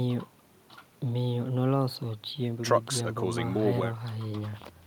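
No technical faults are audible.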